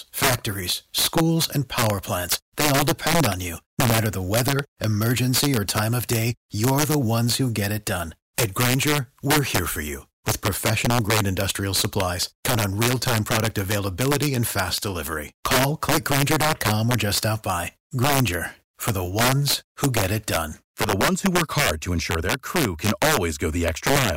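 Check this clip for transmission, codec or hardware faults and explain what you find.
There is one fault, integer overflow, throughout the speech. With gain pushed about 6 dB too hot, around one percent of samples go past the limit and wrap to the opposite sign. Each wrap gives a violent crack, sharper than clipping.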